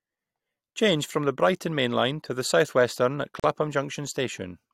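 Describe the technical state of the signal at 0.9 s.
At 0.9 s the speech signal is intact, with no audible technical fault at that moment.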